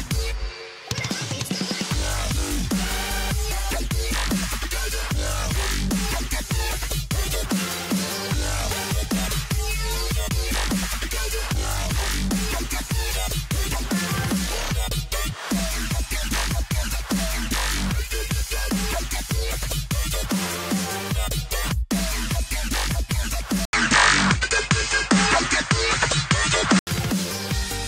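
Likely input switched to a poorer device, 23.65 to 26.87 s: after an 80 ms gap, nothing above 8.9 kHz, a level shift of about 5 dB, and new background noise.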